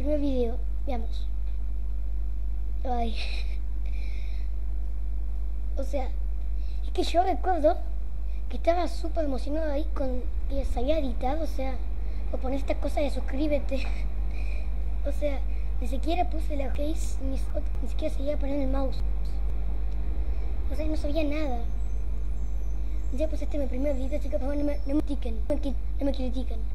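Chunks out of order at 16.75–17.75 s, 19.0–19.5 s and 25.0–25.75 s: a 250 ms chunk plays three, one, then two chunks late, giving jumbled sound at the hard joins.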